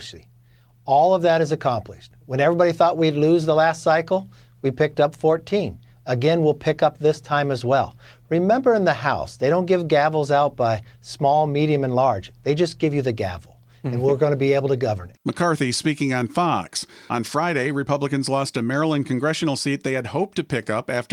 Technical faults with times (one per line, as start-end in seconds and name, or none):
none